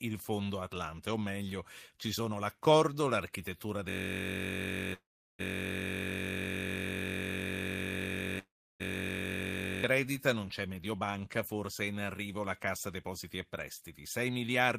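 From 3.89 to 9.84 s there's a system hang loop: one 21.33 ms slice, which fits a 1024-sample buffer, repeats as a steady 46.9 Hz buzz while the system sits frozen.

Inside that stretch, at 4.93 to 5.41 s and 8.39 to 8.82 s, come two call audio freezes: the sound trails off into silence, likely from held-up packets, then resumes where it stopped, with nothing lost.

From 14.2 s to the end, a jitter buffer speed-up trims about fifty milliseconds in small pieces, so the speech runs at 109% speed and sounds a bit hurried at the same pitch.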